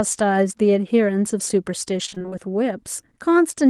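From 2.05 to 2.34 s, repeated packet loss gives the speech a choppy, robotic sound. It is a rapid run of holes, none longer than 28 ms, each patched by stretching the previous sound, rather than one single dropout.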